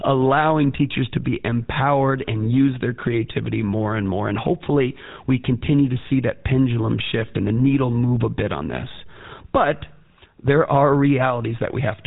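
GSM full-rate codec damage runs through the whole clip. The codec rebuilds the speech from a vocal-tract model excited by sparse, regular pulses, which fits a 13 kbps stream. This leaves a plainly audible buzzy, gravelly roughness, with nothing above 3.8 kHz.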